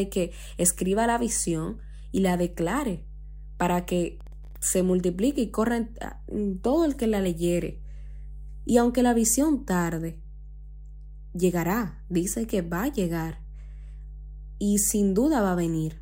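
Mains hum runs throughout: a ground loop or nearby transformer leaks the 50 Hz power line into the speech as a steady low drone, sitting fairly high, roughly 15 dB under the voice.

Processor overload crackle, 4.21 to 4.56 s, between "y la declare para" and "se multiplique y corra": the processor falls behind on very short audio buffers, well under a millisecond each. Each missed deadline drops in a hard-edged sliver of silence, and together they make a brief gritty crackle.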